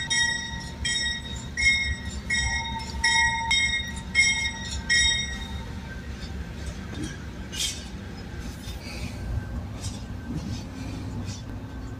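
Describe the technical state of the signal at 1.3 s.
At 1.3 s the signal is intact, with no audible fault at that moment.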